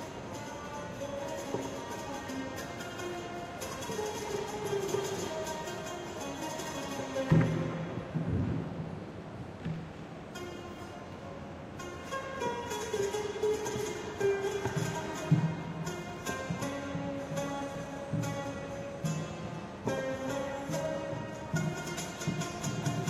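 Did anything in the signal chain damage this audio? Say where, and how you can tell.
Yes, at the playback stage, where streamed segments are joined, there is overlap between stream segments. Short stretches of sound are missing at 5.78–5.81 s, 9.76–9.79 s, 13.74–13.76 s and 21.74–21.77 s, each roughly 23 to 36 ms, and the waveform jumps across each cut. The cuts fall on a 4-second grid, which fits 4-second segments whose time stamps overlap, so the player trims material that was never duplicated. Unlike a dropout, no silence or concealment fills the gap.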